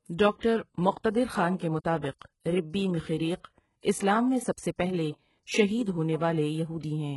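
From start to finish the speech carries heavy codec damage, likely HE-AAC compression at a rate that fits about 12 kbps. Nothing remains above 11.5 kHz, and the treble that is present is rebuilt from copied lower bands, so s sounds turn gritty and metallic. Unlike a plain low-pass, the top stays bright but false.

Just after "خان کے", from 2.19 to 2.21 s, a 27 ms pre-echo appears: quantisation noise spread across the codec block fills the quiet moment before an attack, giving a brief hiss and a softened onset. Unlike a click or dropout, the disturbance comes before the attack.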